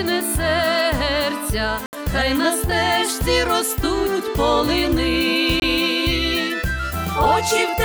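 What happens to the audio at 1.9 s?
A corrupt frame muted gap cuts the audio from 1.86 to 1.93 s: damaged compressed frames were rejected and replaced by silence, roughly three frames' worth. It shows as a flat waveform and a blank full-band column on the spectrogram.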